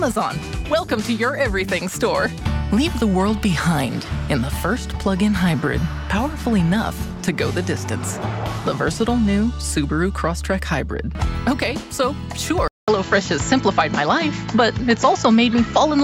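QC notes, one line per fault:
12.68–16.04 s, input switched to a poorer device: after a 200 ms gap the sound turns duller and shifts a few dB in level, with nothing above 7.6 kHz and a new noise floor only moderately below the signal, likely a change to a narrower-band microphone.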